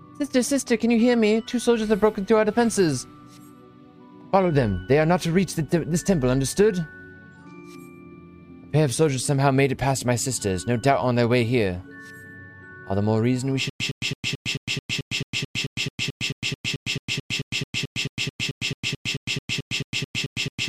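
From 13.7 s to the end there's a stutter with silent gaps: a 112 ms burst repeats, then 107 ms of digital silence, every 219 ms, 32 times over. Likely the stream stalled and replayed its last fragment on each retry, so the real audio there is gone.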